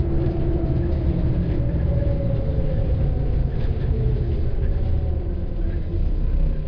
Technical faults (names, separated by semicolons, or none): none